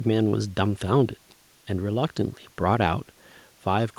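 Nothing stood out as a technical fault on listening to the speech in this recording.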